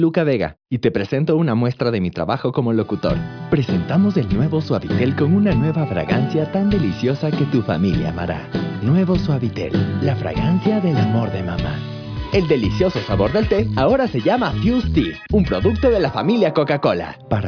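No technical faults are audible anywhere in the recording.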